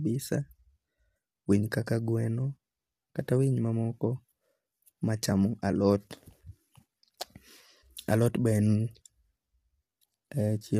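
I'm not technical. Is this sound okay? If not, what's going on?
No. The speech sounds rough and grainy from start to finish, with a fuzzy hiss tucked between the voice's tones and a dull, fake-sounding top end. That's likely low-delay AAC compression, the kind video calls use, squeezing the audio too hard.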